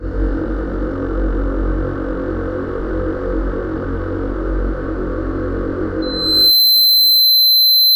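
At 6.02 s, loudspeaker feedback squeal: a runaway 4.1 kHz loop tone swells over roughly half a second to about 10 dB above the sound, unlike a steady whistle.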